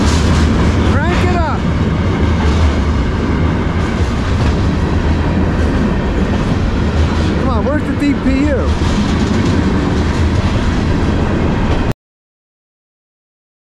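The audio has a cut-off end at 11.92 s. The sound stops mid-event, with no natural decay. Digital silence follows until the clip ends at 13.8 s. The final buffers were never written or played out, so the sound was truncated.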